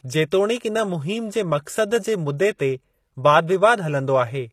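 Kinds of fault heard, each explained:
HE-AAC compression: The treble of the speech is gritty, with s sounds turning metallic and lispy, and the damage is plainly audible throughout. The likely cause is HE-AAC coding at a low bitrate, which fits about 24 kbps. Only the lower spectrum is coded directly. The upper bands are rebuilt by copying lower content upward under a coarse envelope, so harmonics fail to line up across the crossover. Content extends to about 20.7 kHz.
pre-echo: Just before a sharp attack at 2.58 s, a brief hiss creeps in and the onset sounds softened and smeared rather than crisp. The codec spreads its quantisation noise across a whole transform block. Because this attack falls late in its block, noise sized for the loud moment also fills the quiet stretch ahead of it, here spread over about 17 ms.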